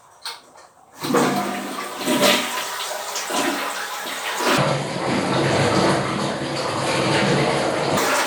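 From 4.57 s to 7.97 s the audio suddenly drops in pitch by about ten semitones and drags, everything stretched and sluggish, until it snaps back near the end. This is a section at the wrong speed: that stretch plays at 0.535 times its proper rate, so pitch and tempo fall together. The likely cause is an editor or player that applied the wrong clock or sample rate to that segment.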